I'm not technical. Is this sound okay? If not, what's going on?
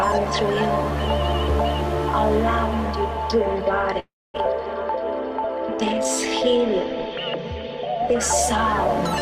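No. From 3.99 to 4.36 s the sound freezes: the last moment stretches into a fading buzz, then about a quarter second of silence, and the audio resumes where it left off, nothing lost, just delayed. This call audio freeze likely came from data held up on the network.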